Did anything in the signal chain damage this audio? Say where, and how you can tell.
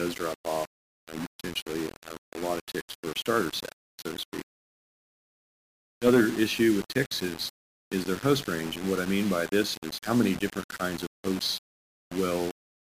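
Yes. Sample-format conversion is the damaged stage, and the fault is low bit depth without dither, likely from rounding to a 4-bit word. Throughout, grainy distortion tracks the sound, only about 15 dB down, and quiet moments sputter or vanish. Waveforms show coarse staircase steps, and spectrograms show signal-following hash across the band.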